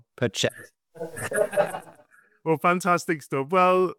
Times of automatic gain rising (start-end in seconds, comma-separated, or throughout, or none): none